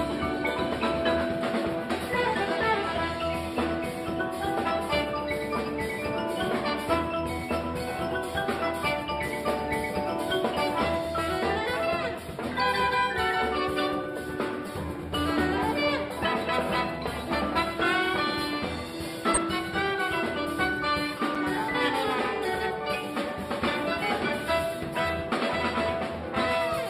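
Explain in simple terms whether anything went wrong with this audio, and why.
Two kinds of fault occur.

Corrupt frame decoded: damaged compressed data was played anyway, putting sound at wrong pitches. This gives a chirp, squeak, blip or noise burst at 14.66–14.69 s (one frame) and 19.34–19.37 s (about two frames).

Block of digital silence: either the program ran late filling its output or a calculation failed, so a 5.8 ms run of zeros, consistent with a 256-sample block, was played at 21.35 s. It is heard as a tick or dip.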